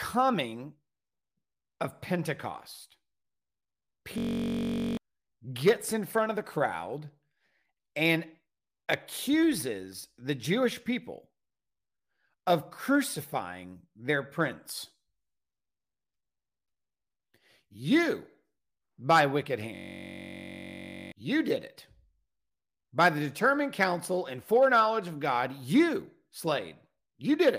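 Speech clip with two system hang loops, at 4.18 to 4.97 s (before "gets in front of") and 19.76 to 21.12 s (between "by wicked" and "you did it"). The system stalled while the hardware kept replaying one 21.33 ms slice, fitting a 1024-sample buffer. Each loop is a 46.9 Hz buzz replacing roughly 0.7 s and 1.5 s of speech, seen as identical repeating waveform blocks and evenly spaced horizontal spectrogram lines.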